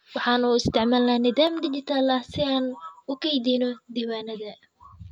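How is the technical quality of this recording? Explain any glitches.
The recording has one clear problem. From 1.47 s to the end, there's channel delay (comb filtering). One channel lags by roughly 10 ms, and mono summing carves evenly spaced notches starting somewhere around 40 Hz, so the speech sounds hollow and phasey.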